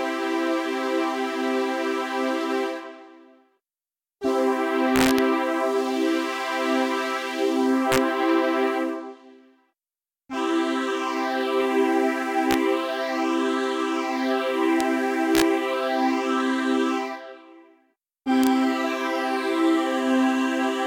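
A level that ran past the top of the integer range wrapped to the opposite sign instead of being limited: integer overflow, at 4.96–5.19, 7.92–7.98, 12.51–12.54, 14.81, 15.35–15.42 and 18.44–18.47 s. Peaks pushed about 0 to 2 dB over flip across the full range, giving violent cracks far harsher than clipping.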